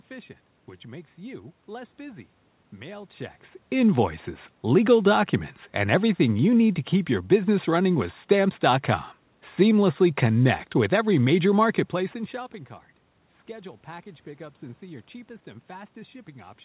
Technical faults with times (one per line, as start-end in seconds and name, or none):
none